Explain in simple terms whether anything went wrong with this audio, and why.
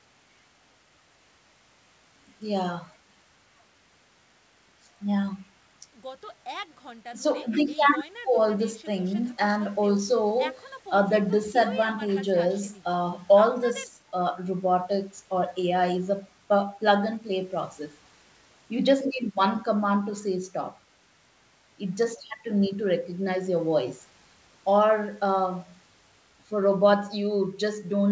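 Nothing went wrong with this audio.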